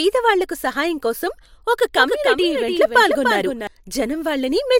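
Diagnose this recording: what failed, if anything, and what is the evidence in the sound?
A doubled audio track runs from 1.95 to 3.67 s: a full-band copy of the speech trails by around 300 ms, roughly 5 dB quieter, with no decay or room colour, and it cuts in and out abruptly. This likely comes from a second, slower capture or routing path mixed back in.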